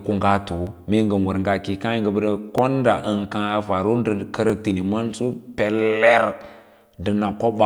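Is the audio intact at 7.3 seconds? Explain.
Yes, at 7.3 seconds the speech plays through cleanly with no dropout, click, glitch or other fault.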